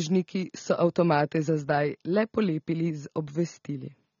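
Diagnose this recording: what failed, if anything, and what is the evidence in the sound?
The codec stage is the culprit. All the way through, the speech is dull and smeared, with a fizzy edge on sibilants and nothing above 6.9 kHz. That's likely AAC compression, AAC-LC at a low bitrate (fits roughly 24 kbps), quantising coarsely and chopping off the top band.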